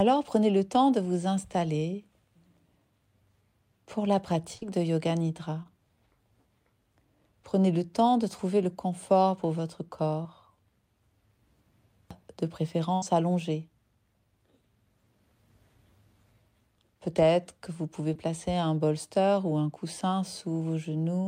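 Audio from a packet-based call carries four short concealed packet losses near 4.57, 5.63, 10.23 and 18.14 s, each replacing 20 to 40 ms with an extended copy of the preceding sound and heard as a brief smear or wobble. At 12.95 to 13.04 s a burst of packet loss drops about 80 ms: the fill holds and fades rather than blending straight back, so it becomes a buzz or hiss before the audio resumes later with a section missing.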